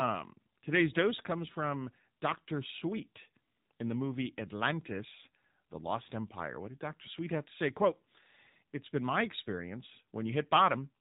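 Speech that carries the AMR narrowband mobile codec for its whole length: nothing passes above 4 kHz, and the voice has the plainly audible buzzy, synthetic edge of a low-rate setting, which fits roughly 7.4 kbps. A spectrogram shows a hard ceiling at 4 kHz, with coarse, smeared formant bands below it.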